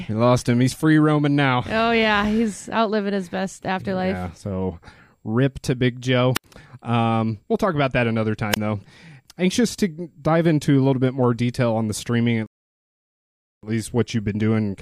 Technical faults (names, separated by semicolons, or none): wireless microphone squelch dropout; rebuffering stall